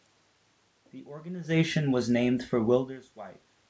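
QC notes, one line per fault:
Nothing stood out on listening that calls for a QC note.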